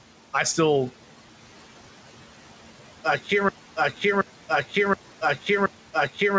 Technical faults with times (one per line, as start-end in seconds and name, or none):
0.00-6.38 noise suppressor artifacts
3.49-6.38 broken-record loop